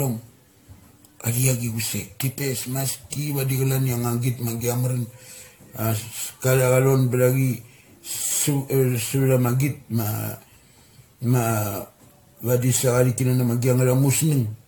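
Throughout, the speech sounds swirly, hollow and smeared with blurred attacks, likely generation loss from roughly seven AAC encode passes near 96 kbit/s, with nothing above 18.8 kHz.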